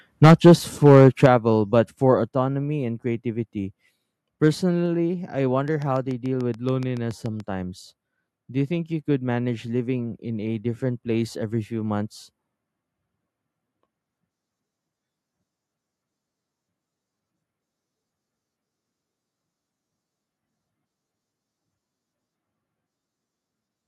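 Speech, with its loudest opening syllables flattened by microphone overload from 0.23 to 0.53 s, peaking about 8 dB past the converter's ceiling with roughly a tenth of samples clipped, and again from 0.85 to 1.26 s, about 4 dB over with roughly one sample in twenty clipped. The harsh crackle tracks the peaks, likely an input set too hot. The microphone volume stepped down at 0.26 s by about 2 dB, at 1.26 s by about 7 dB and at 2.28 s by about 3 dB. Unlike overload these are clean, sudden drops that lower voice and background together, likely automatic gain control reacting to the clipped peaks. From 5.68 to 7.41 s a train of clicks, around fifteen of them at a regular 7 per second and about 5 dB above the signal, ticks through the pauses as well, which sets it apart from clipping. Its likely source is electrical interference or a struggling interface.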